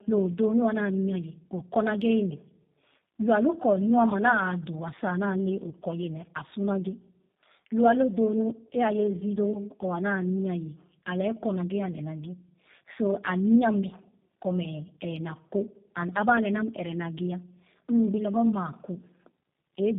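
From start to finish the speech carries tandem speech coding damage. It sounds like it went through a low-rate coder twice, which fits G.729A at 8 kbit/s on both ends with a plain G.711 hop in between. The second coder had to model audio already mangled by the first, so the errors pile up. You get a rough, warbly texture, and with nothing above 3.8 kHz it comes across muffled and boxy too.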